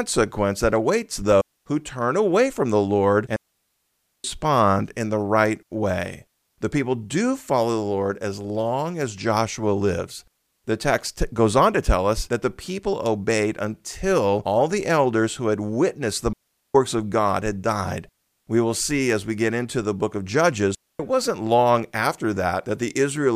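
The speech drops out four times, each one a digital wireless dropout. First at 1.41 s, right after "that awaits", there's a quarter-second hole before "who turn away from". Then a long one from 3.36 to 4.24 s, close to 0.9 s. At 16.33 s, after "who had witnessed the", it's gone for about 0.42 s. Last, at 20.75 s, after "into the book of", another quarter second before "wasn't long after". Each time the receiver has lost too much data and simply mutes with a very quick fade. So you get clean near-silence with no crackle or noise burst on either side.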